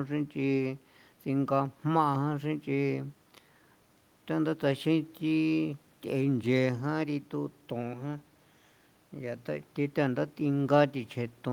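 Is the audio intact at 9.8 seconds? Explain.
Yes, the audio is intact at 9.8 seconds, with no fault present at that moment.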